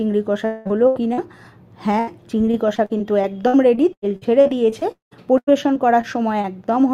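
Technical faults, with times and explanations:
0.45–1.19 s, repeated packet loss (robotic sound): four gaps in quick succession remove about 340 ms of audio, the longest nearly 200 ms. Each hole is patched by stretching the preceding sound, so almost half this stretch is synthetic fill, heard as choppy stutter.
1.99–2.09 s, burst of packet loss: roughly 80 ms of consecutive audio never arrives in time. The receiver prolongs the last sound while turning it down, giving a brief held buzz or fading hiss, then playback jumps ahead with that slice gone.
2.45–6.46 s, repeated packet loss (robotic sound): 22 separate dropouts remove about 840 ms in total, the longest close to 200 ms. Concealment fills roughly a fifth of this span with extended copies of earlier sound, making the audio choppy and broken, with pieces missing.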